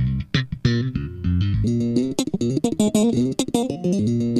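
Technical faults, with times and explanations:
1.64 to 4.40 s, audio read two samples at a time (double speed): from 1.64 s the sound runs at twice its speed and an octave (12 semitones) higher. Each pair of samples is taken as one frame, as if the stream held two channels or samples twice as wide. A spectrogram shows every component shifted to double its frequency, with events packed into half the time.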